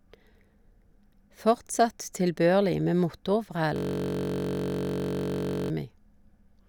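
This speech clip has a system hang loop from 3.76 to 5.70 s. The sound stops moving forward and a 21.33 ms slice repeats exactly, about 90 times. At 46.9 repeats per second it merges into a steady buzz. The computer or driver froze while the sound hardware kept replaying the same ring buffer. The loop length fits a 1024-sample buffer.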